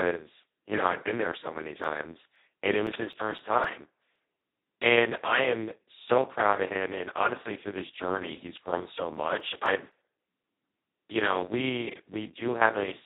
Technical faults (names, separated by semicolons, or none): Speex codec; CD scratch ticks